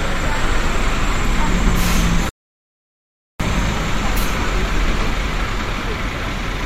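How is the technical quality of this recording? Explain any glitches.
There's one real glitch here, a playback stall, so it's worth a quick look. From 2.29 s to 3.40 s the sound simply drops out in mid-flow, leaving a silent gap of about 1.1 s before it comes back. The likely cause is that the player ran dry of buffered data, or its output thread got blocked, and it just emitted silence until it could catch up and carry on.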